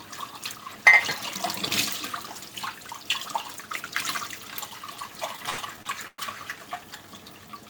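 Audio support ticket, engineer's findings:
Repeated stalls (stutter), 5.36–6.19 s: five hold-ups, longest 110 ms, about 30% of the span concealed. Jitter buffer underrun from late or slow packet arrival. Receiver extends the preceding sound, so the audio drags without loss.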